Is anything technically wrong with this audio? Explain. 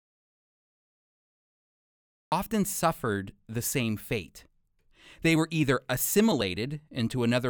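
Yes. There's an audio dropout to silence from the start until 2.32 s: pure silence, no room tone. Likely the input link dropped, then the speech comes back abruptly.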